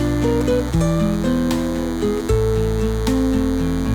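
A thin, steady buzz at 100 Hz with many harmonics runs throughout, about 20 dB below the sound: DECT cordless phone buzz, rectified radio bursts every 10 ms.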